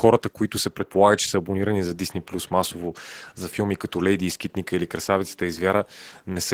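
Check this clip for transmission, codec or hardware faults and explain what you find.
One codec fault runs through the whole speech clip: Opus voice compression. A linear-prediction layer carries the lower band and a transform layer the top, with coarse excitation leaving the speech hoarse and faintly robotic. That fits roughly 16 kbps in hybrid mode. The band stays full, so it is coding damage rather than simple band-limiting.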